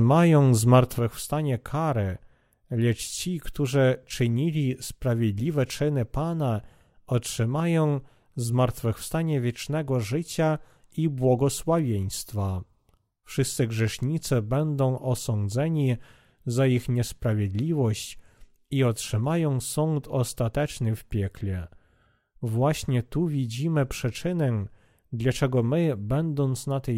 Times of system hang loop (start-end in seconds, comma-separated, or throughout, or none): none